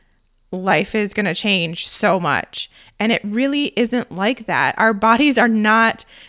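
No technical faults can be heard anywhere in the recording, and the signal holds steady throughout.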